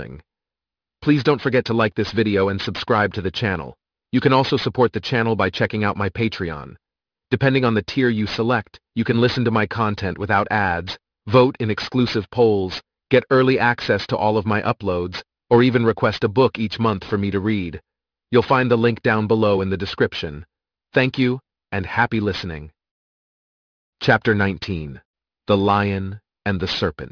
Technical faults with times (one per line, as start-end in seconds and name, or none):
0.00-27.12 aliasing